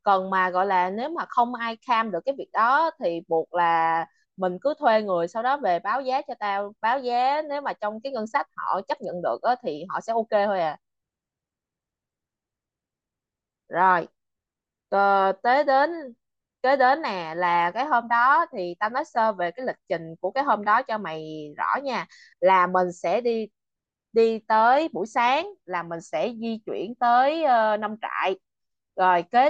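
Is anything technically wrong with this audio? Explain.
No, nothing technically wrong can be heard anywhere in this speech recording.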